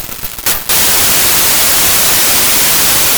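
A music clip, with a wrong sample width fault throughout. Packed 24-bit samples are read as 32-bit ones. Most values mix bytes from neighbouring samples. So loud noise swamps the music, which survives playing 1.33 times too fast and pitched up.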